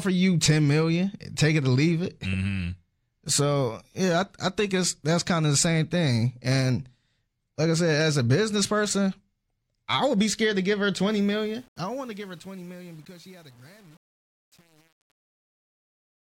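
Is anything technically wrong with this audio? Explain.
Yes. The speech ends in a fade-out that starts around 11 s and runs to 16.4 s, and from 11.07 s to the end that fade carries truncation distortion. It is worst from 11.62 s to 16.38 s. The gain stage that makes the fade throws away low-order bits without dither, which fits an 8-bit stage. As the level drops toward the smallest step, the waveform collapses into a few square steps. The tail sounds gritty. A spectrogram shows broadband hash and harmonic smear rising relative to the fading signal.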